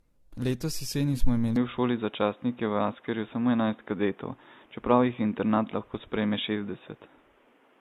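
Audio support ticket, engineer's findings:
Generation loss, whole clip: swirly, smeared, hollow texture, blurred attacks, nothing above 14 kHz. Likely cause is repeated AAC-LC decode/re-encode at 64 kbit/s, roughly five passes, each requantising on a shifted frame grid so damage accumulates.

Input switched to a poorer device, 1.56 s to end: band abruptly capped at 3.8 kHz, dull boxy tone, new noise floor about 35 dB under signal. No gap or level jump at the switch. Narrowband mic/headset call-profile path suspected.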